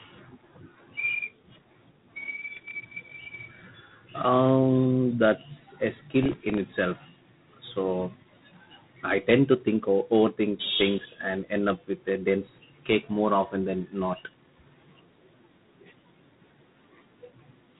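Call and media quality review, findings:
G.726 ADPCM artefacts throughout speech. Harsh rasping hiss tracking speech level. Nothing above 3.8 kHz. Coarse difference coding, consistent with 24 kbit/s.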